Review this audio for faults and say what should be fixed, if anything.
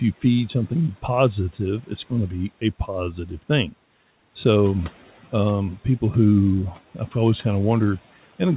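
Speech cut by the noise suppressor occurs between 3.13 and 3.5 s. The suppressor mistook part of the speech for background and turned it down with the noise, by about 7 dB at its deepest, over about a tenth of a second in total. The affected sounds come out swallowed and faint rather than vanishing. A packet-loss dropout would leave a hard gap, click or repeated fragment instead. Here the room noise, about 26 dB below the speech, dips along with it. To prevent it, lower the suppressor's aggressiveness or lengthen its release so that low-level speech is not classed as noise.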